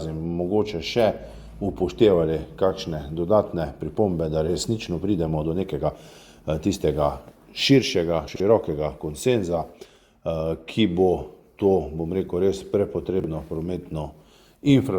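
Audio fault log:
8.28–8.40 s and 13.20–13.28 s, chunks out of order: a 40 ms chunk plays two chunks late, then one chunk late, jumbling the sound; the waveform shows abrupt steps at three joins in each.
11.6 s, corrupt frame decoded: damaged data in a couple of compressed frames decoded as a faint blip; the spectrogram shows a brief smear of energy at the wrong frequencies.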